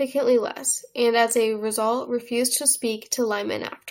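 A short bit of speech, and there's nothing technically wrong with it that a listener would pick up on.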